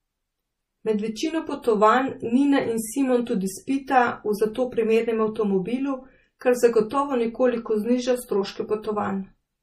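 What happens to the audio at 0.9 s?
At 0.9 s, as throughout, likely MP3 compression is audible: no treble above 14.8 kHz and a watery swirl from weak bands flickering, seen as a flat spectrogram ceiling with speckled gaps.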